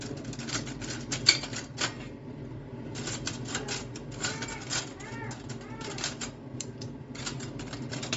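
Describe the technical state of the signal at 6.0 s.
At 6.0 s you're hearing the same band-limited, grainy quality that runs through the whole clip, nothing peculiar to that moment. Everything stops at about 7.7 kHz, and what's left up top has a breathy, noisy texture. That's most likely Bluetooth LC3 compression: the codec drops much of the upper spectrum, fills the gaps with noise, and works in short blocks, consistent with 10 ms frames at a fairly low bitrate, around 32 kbps.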